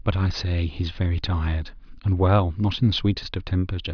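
No technical faults can be heard anywhere in the recording; the speech signal stays continuous and intact throughout.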